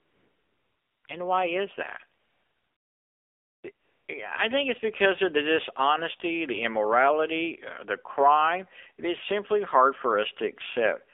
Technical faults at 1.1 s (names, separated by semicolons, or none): AMR narrowband mobile codec; AMR comfort noise